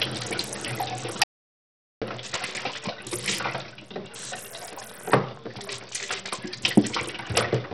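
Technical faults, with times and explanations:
Throughout, Bluetooth SBC compression: the top end is thin and keeps flickering in and out, with a gritty grain riding on everything. That's the sound of this codec starved of bits. Its eight sub-bands get only a small bit allocation, so the quiet treble bands drop to nothing now and then while the rest are crudely quantised, leaving noise and aliasing. The damage is heavy, which points to a low bitrate, likely something around 64 kbps.
1.24 to 2.02 s, audio dropout to silence: the sound simply stops for about 0.78 s and then picks up again mid-flow. The gap is dead digital silence, with no room tone or background at all, so the input was probably lost and the recorder kept writing silence. A brief disconnect or a glitch in the link is the likely cause. Whatever happened during that stretch is just gone.
4.55 to 6.29 s, train of clicks: a steady ticking sits on top of the sound, about 11 clicks per second at a regular pace, roughly twenty in all. 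They peak at about the same level as the sound itself, so they're hard to miss. The clicks all have much the same shape, which means one source firing repeatedly, likely interference from nearby gear or a faulty connection or power supply.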